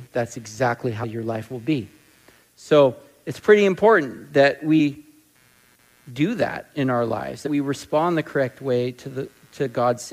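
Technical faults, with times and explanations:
Throughout, computer activity noise: processor and peripheral load shifts the audio circuit's shared ground, adding a faint buzz pulsing around 100 times a second, roughly 40 dB below the sound.
1.02–1.04 s, 4.79 s and 7.46–7.48 s, damaged data in a compressed stream: corrupted bytes make the decoder misread frames and lose sync, producing brief chirps or blips at each point.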